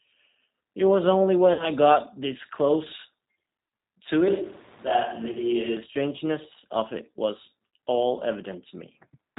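Speech coded throughout with the G.729 codec, which points to an 8 kbit/s VoIP link. Nothing above 4 kHz survives. The voice is intelligible but plainly rough and synthetic, rebuilt from a vocal tract model and a few pulses per frame. VoIP packet loss concealed by the speech codec occurs four times: 1.53 to 1.69 s, 3.68 to 3.71 s, 5.32 to 5.39 s, and at 7.76 s. The decoder stretches its last pitch and filter into a fading buzzy tone or coloured noise. The first gap covers about 60 ms, which fits two lost packets. The others cover 30 ms each. The voice stays weak or distorted for tens of milliseconds or more after each gap.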